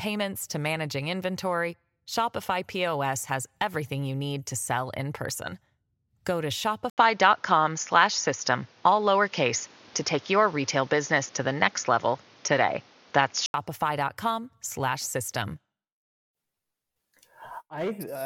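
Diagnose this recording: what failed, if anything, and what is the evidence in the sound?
At the device stage, the input likely switched to a poorer device from 6.90 to 13.54 s. Its narrower band blanks the spectrogram above 6.9 kHz, and the waveform shows an 80 ms gap, a small level step and faint new noise.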